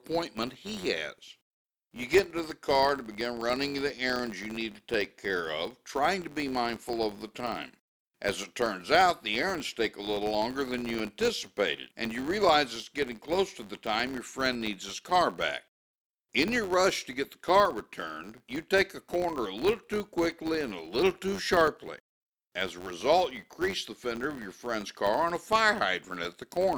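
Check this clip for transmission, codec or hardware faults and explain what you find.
One fault runs through the entire speech clip.

Filter restarted on every block, throughout: a filter drops its stored state at each block boundary and begins again from silence, leaving a small transient every time. Those repeat as a buzz near 93.8 Hz, which fits a 512-sample buffer, and it grows and fades with the speech level.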